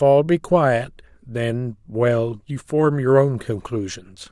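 No technical faults can be heard anywhere in the speech, so there is nothing to describe in time order.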